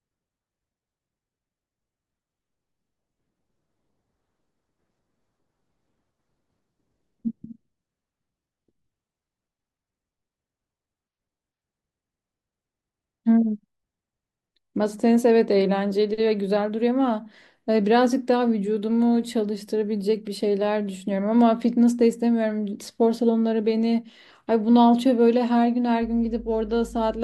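From 26.02 s to the end at 27.23 s, mains hum sits under the speech: a steady 50 Hz tone roughly 20 dB below it, where a ground loop or nearby transformer lets the power line into the signal. Unlike rumble, it holds one fixed pitch.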